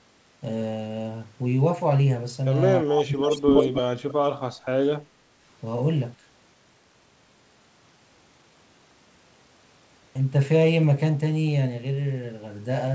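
From 2.83 to 4.79 s the speech dips, thins and breaks up, falling by around 35 dB for about a second and a half. This is likely speech suppressed in double talk, with the echo canceller turning down both its own talker and the loudspeaker echo.

From 3.19 to 3.78 s a second copy of the speech trails about 0.31 s behind, roughly as loud as the original: likely an echo leak the canceller failed to remove.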